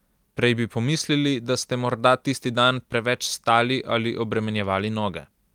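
Nothing in the speech here calls for comment; there's no glitch, dropout or distortion anywhere along the way.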